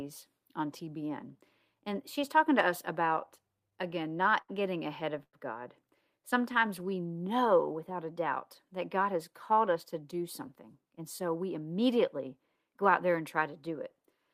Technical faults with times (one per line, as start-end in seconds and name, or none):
3.15-4.50 repeated stalls (stutter)
5.23-5.35 call audio freeze
6.14-7.15 jitter buffer slow-down
9.01-11.50 jitter buffer speed-up